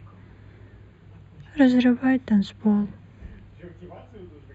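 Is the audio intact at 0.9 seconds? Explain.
No. At 0.9 seconds, as throughout the whole speech clip, there is channel delay (comb filtering). One channel runs a few samples late, roughly a tenth of a millisecond, and when the two are summed to mono, the shared content cancels at evenly spaced frequencies, the first near 5 kHz. The speech sounds hollow or phasey. A spectrogram shows fixed dark horizontal bands that stay put regardless of what is said.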